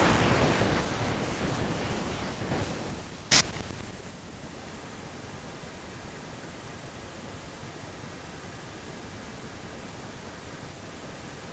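From 4.44 s to the end, a faint delayed copy of the speech trails the original by about 0.25 s, roughly 20 dB quieter. This is an echo leak, likely from a far-end loudspeaker whose echo canceller let part of the microphone pickup return down the call. Unlike room reverberation, which smears sound continuously, this is a distinct, fixed-delay repeat that starts partway through and stays, heard against audio that stops at 8 kHz.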